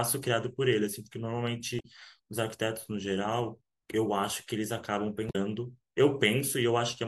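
At 1.77–1.85 s and 5.27–5.36 s, damaged data in the compressed stream makes the decoder misread frames, giving brief glitches as it loses sync.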